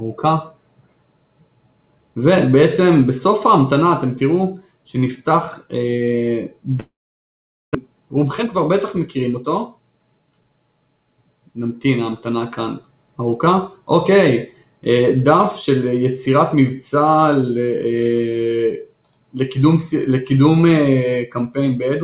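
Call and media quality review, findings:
Long network dropout, 6.8 to 7.77 s: fading buzz, then about 0.8 s of silence; audio resumes with roughly 0.6 s never played. Likely cause: packet loss on the network. Receiver concealment stretched the last sound, then gave up.

Jitter buffer speed-up, 7.86 to 10.57 s: hurried delivery at unchanged pitch, about 112% speed. Backlog of roughly 0.3 s after late packets arrived together; buffer trimmed repeated pitch-period slices to shed delay. Band-limited at 4 kHz throughout, consistent with G.711 A-law at 64 kbps.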